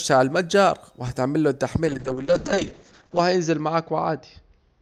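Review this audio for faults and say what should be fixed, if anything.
A call bitrate drop starts at 1.87 s and runs to the end. The bandwidth estimate collapsed and the encoder was told to spend far fewer bits, which fits a fall from around 48 kbps to around 7 kbps. The speech's upper limit shrinks from 20 kHz to 8 kHz, so it turns muffled and rough. The coarsest stretch lasts 1.34 s. To prevent it, set a higher minimum bitrate and smooth the bandwidth estimator so brief congestion doesn't trigger such a steep cut.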